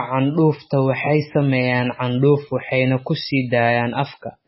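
Speech runs through heavy MP3 compression for its whole length, with nothing above 5.6 kHz, a watery, swirling texture and smeared consonant onsets. On a spectrogram, energy stops at a flat ceiling and the high bands flicker in blocks. The damage fits a very low bitrate, likely around 16 kbps.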